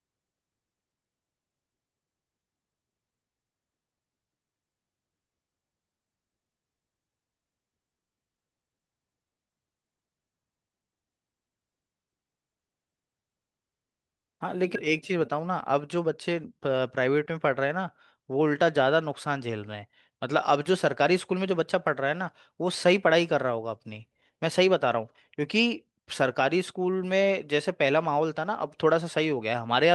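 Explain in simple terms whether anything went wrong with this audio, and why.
At 14.75 s the speech suddenly jumps forward, losing about a second with no gap: a skip ahead, where delayed audio was thrown away to catch up.

From 14.87 to 16.81 s the speech sounds hurried at the same pitch, running 10% fast. This is a jitter buffer speed-up, trimming about a fifth of a second of built-up delay.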